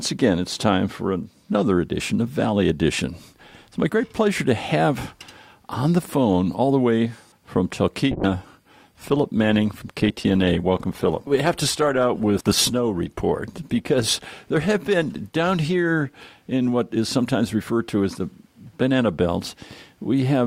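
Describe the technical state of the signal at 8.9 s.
At 8.9 s a call bitrate drop is under way, spanning 8.13 to 17.59 s. The encoder's allotted bits collapsed, consistent with roughly 128 kbps falling to about 19 kbps, so coding turns coarse and highs are trimmed, leaving the sound rough and muffled.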